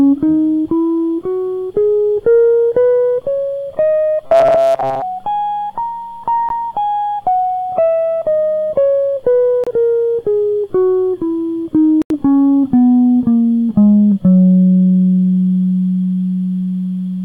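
From 4.27 to 5.03 s the music turns into a rigid, metallic buzz pitched at 134 Hz. This is robotic sound from repeated short buffers, likely caused by new audio arriving too slowly, so the playback path loops the last fragment instead of fresh material. A 134 Hz buzz fits a repeat of roughly 7.5 ms, and most of the sound in this stretch is recycled rather than new, which is why the music loses its natural texture and only loosely follows its original contour.

Three Bluetooth dropouts follow, each a silent gap after which the music resumes further along, as though it had kept playing. At 6.49 to 6.52 s about 14 ms of audio is lost, consistent with a single missed packet. At 9.64 to 9.67 s about 28 ms goes missing. At 12.02 to 12.11 s the gap reaches 84 ms. The likely cause is packets failing to reach the headphones in time.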